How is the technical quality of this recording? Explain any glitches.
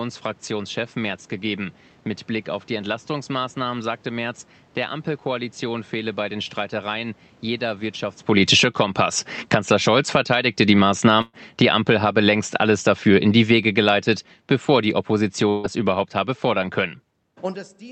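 The speech has a few audible glitches: the level keeps getting pulled down, and two short chunks drop out. The call codec's top end stops around 8 kHz.

Automatic gain falling, from 8.22 to 8.84 s (about 12 dB), 9.38 to 13.99 s (about 10 dB), and 14.62 to 16.84 s (about 3 dB). The gain control decided the input was too hot or its background noise too strong and eased it down, so the speech and the room noise sink together.

Burst of packet loss, from 11.21 to 11.35 s and from 15.49 to 15.66 s. About 120 ms and then 140 ms of audio never arrived in time. The receiver stretched the last sound and faded it, then jumped ahead with that stretch gone.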